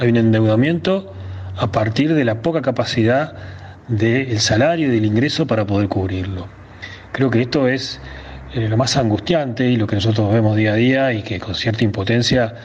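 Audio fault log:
throughout: gain pumping. The level swings by around 10 dB. Loud and soft passages sit unnaturally close together, giving a squashed sound. The likely cause is input gain set far too high, with a fast limiter or compressor clamping down on each peak.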